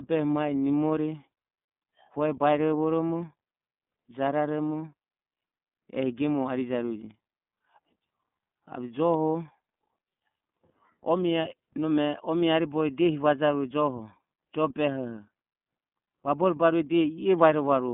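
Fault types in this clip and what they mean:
iLBC codec: The speech runs through a narrowband VoIP codec that codes each block of excitation independently, which fits 30 ms frames at its 13.33 kbps mode. The damage is plainly audible as a rough, slightly synthetic texture. The line band covers roughly 150 Hz to 3.5 kHz. On a spectrogram, energy stops flat at about 3.7 kHz with nothing above it for the whole clip, and the low end thins out below 150 Hz.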